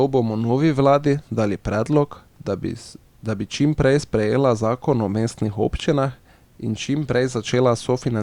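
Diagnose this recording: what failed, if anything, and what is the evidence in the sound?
Nothing failed: no stage from wiring and conversion through to storage and playback leaves an audible fault in this speech recording.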